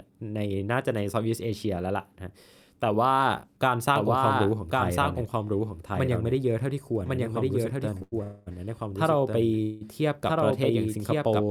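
A speech clip with three kinds of fault. From 3.96 s to 11.43 s there is a doubled audio track. A second full-band copy runs roughly a second behind, at about the same level. It cuts in abruptly and has no room colour. The likely cause is a second capture path or an edit leaving two copies out of step. At 8.02 s to 8.14 s there is a short stall from a late packet. The receiver holds the last sound for 95 ms, then resumes where it left off. Nothing is lost, but everything after runs 95 ms later. Two call audio freezes follow, at 8.23 to 8.48 s and 9.62 to 9.83 s. The last sound is carried on and fades for 235 ms and then 186 ms, with no true silence. The likely cause is delayed packets emptying the jitter buffer.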